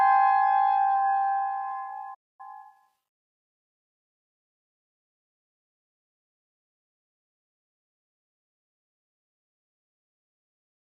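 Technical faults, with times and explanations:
2.14–2.41 s, playback stall: the sound cuts off abruptly mid-flow and the output drops to silence for about 247 ms before resuming. The player likely ran short of buffered data or had its audio thread blocked, so it emitted nothing until it recovered. On a waveform this is a flat, silent gap with hard edges. On a spectrogram it is a clean vertical blank band across all frequencies.
2.41–2.89 s, time-compressed catch-up: immediately after the gap, the audio runs hurried at about 1.5 times normal speed while keeping its original pitch. The player is clearing the backlog that built up during the stall by dropping short slices and cross-fading the remaining pieces together. On a spectrogram, harmonics stay at their usual heights while events are squeezed closer in time. The waveform shows compressed envelopes with small seam irregularities.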